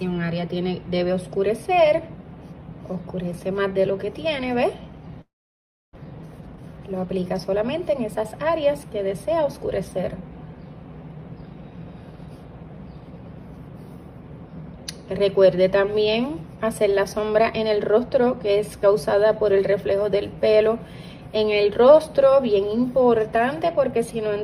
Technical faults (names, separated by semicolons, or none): long network dropout; jitter buffer speed-up